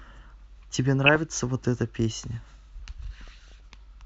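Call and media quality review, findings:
DAB burbling, 1.04–1.16 s: brief noise blips in single sub-bands over the speech. Probable component: DAB receiver/MP2 decoder. Weak reception, residual bit errors slipping past error correction, corrupting samples and scale factors per frame.

DAB burbling again, 3.28–3.73 s: longer run of noise blips, lower error rate but more frames affected. Same cause.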